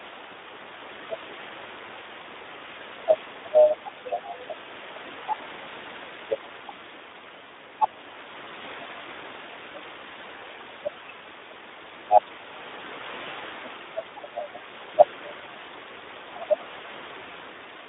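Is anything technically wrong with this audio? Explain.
Yes, the speech has Speex codec damage throughout: too few bits for the excitation make it hoarse and gritty, at about 11 kbps, and the band is narrow, roughly 250 Hz to 3.7 kHz. The room noise sits about 22 dB beneath the speech.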